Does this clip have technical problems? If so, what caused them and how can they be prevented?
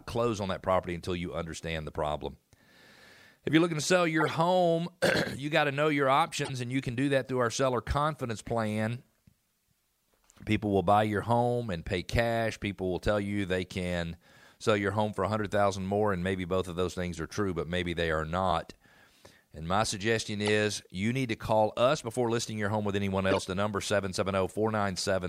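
Yes. Four short bursts of corrupt frame decoding occur, at 4.20–4.31 s, 6.45–6.50 s, 20.46–20.49 s and 23.31–23.40 s. Each is a brief chirp or noise blip peaking around -15 to -20 dBFS over the speech and lasting only a few codec frames. Damaged bits in those compressed frames were decoded anyway, so misread gains and codes placed energy at the wrong frequencies. Adding checksums with error concealment, so bad frames are detected and masked rather than played, would prevent it.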